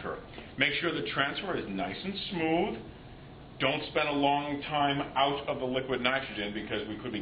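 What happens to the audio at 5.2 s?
An adaptive stream at a lower bitrate is playing from 4.28 s to the end: the connection slowed, so the player switched abruptly, without a gap, to a leaner encoding, which fits a step from roughly 96 to 32 kbit/s AAC. Codec artefacts rise.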